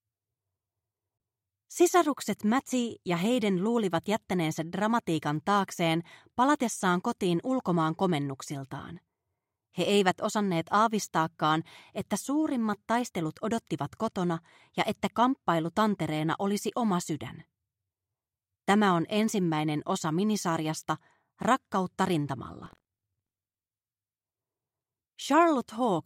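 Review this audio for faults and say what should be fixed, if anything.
Buffer tearing, 22.62–23.87 s: a 43.1 Hz robotic buzz, fitting a 1024-sample buffer, with a small slice of older audio in each period. Unlike dropouts, it leaves no silent gaps. Keep a safe margin between the software's write position and the hardware's read position in the ring buffer.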